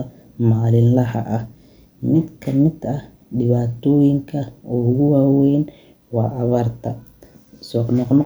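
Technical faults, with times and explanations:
No technical faults detected in this speech recording.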